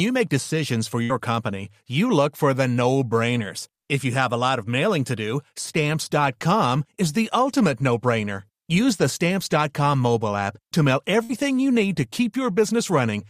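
Speech with two short bursts of packet loss. The first hits at 1.03 to 1.12 s, right after "decisions for", and the second at 11.23 to 11.32 s, between "to mail" and "you need". Each time the receiver stretches the last bit of sound for roughly 60 ms while fading it down, then jumps ahead, so about 60 ms of speech is simply gone and the resumption lands slightly further along than you'd expect.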